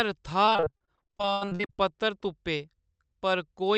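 From 0.45 to 1.8 s, repeated packet loss makes the speech choppy and robotic. Dozens of short holes, up to 80 ms each, are filled by stretching the last sound.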